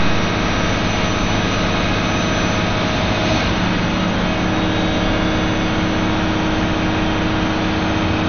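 From the first second to the last, the audio sounds dull and gurgly, with a granular grit on everything and nothing at all above about 6.5 kHz. That's MP2 compression, likely squeezed to a low rate, and the 48 kbps it points to fits the damage. Layer II cuts the spectrum into 32 sub-bands and shares out bits; starved like this, the top bands shut off entirely, and what's left gets quantised so coarsely that it churns.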